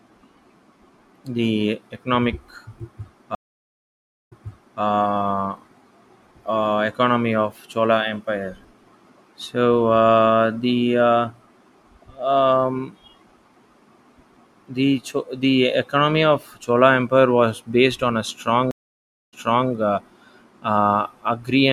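At 3.35 s the speech cuts to silence for 0.96 s, then resumes 0.5 s earlier, repeating itself; at 18.71 s a 0.61 s gap returns 0.38 s back. Each is a stream reconnect: the connection dropped, and a fresh decoder restarted from resent data.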